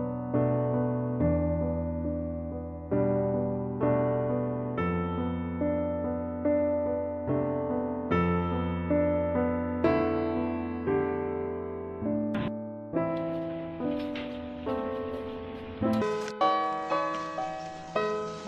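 Section at the wrong speed, from 16.02 s to the end at 18.47 s: the audio runs at 1.93 times its recorded speed and rises about ten semitones, turning high and hurried. The likely cause is playback or editing against the wrong clock.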